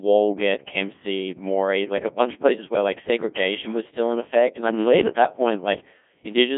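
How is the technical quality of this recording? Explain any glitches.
Poor, because of one fault throughout. Codec 2 vocoder: the speech was rebuilt from pitch, energy and envelope at a rate fitting about 1.6 kbit/s, band-limited to 150 Hz–3.5 kHz, so it sounds heavily robotic and buzzy.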